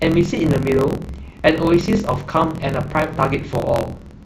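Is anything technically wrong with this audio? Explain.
Yes. A block size mismatch (truncated) runs through the whole speech clip. One stage writes longer blocks than the next reads, so each block's tail is dropped. This causes a 43.1 Hz buzz, fitting a 1024-sample read block. The speech plays 1.12 times fast at near-normal pitch.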